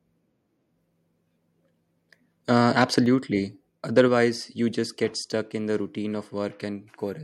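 From 2.78 to 2.84 s a loud speech peak is flattened at the top, giving a short harsh crackle: microphone overload, likely from input gain set so high that the peak overshoots the converter's ceiling by about 4 dB, with a small fraction of samples clipped. At 3.06 s the whole signal, speech and background together, drops by about 4 dB in a single step. This is a microphone volume step-down, likely the call software cutting the device's input gain in reaction to that clipped peak.

The pattern repeats. From 3.97 to 4.01 s another peak clips, overshooting by about 2 dB with a similarly small share of samples cut, and it sounds gritty rather than full. At 4.08 s the level steps down again by about 3 dB, likely as the software trims the input gain once more. At 5.1 s a third step-down lowers the level by about 2 dB, so the audio gets quieter in audible stages instead of a smooth fade.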